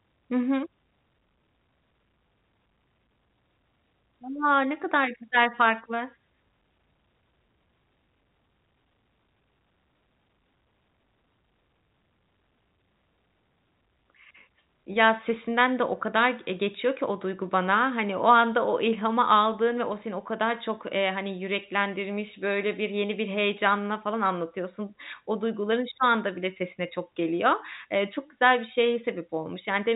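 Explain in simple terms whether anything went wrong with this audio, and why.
Nothing went wrong; this telephone-quality speech sounds as expected.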